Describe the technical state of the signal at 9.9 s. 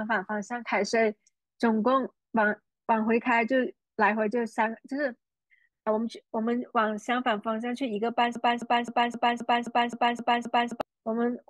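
At 9.9 s the speech is caught in a broken-record loop. It runs from 8.35 to 10.81 s. A fragment of about 0.26 s repeats exactly, back to back, nine times. The likely cause is a stalled stream resending its last buffer, so the intended audio is lost.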